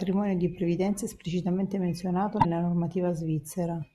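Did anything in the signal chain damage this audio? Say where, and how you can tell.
Yes, at the codec stage. Right after "di previdenza è esplicitamente", from about 2.37 to 2.45 s, there's a roughly 90 ms glitch that doesn't belong to the speech: a brief garbled stretch where the decoded signal turns into nonsense. That's damaged data in a compressed stream. Some bytes in those frames were corrupted, so the decoder misread them, lost sync, and spat out junk until it locked onto a valid frame header again.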